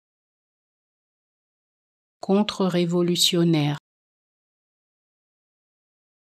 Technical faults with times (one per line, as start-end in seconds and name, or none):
0.46-6.37 one channel drops out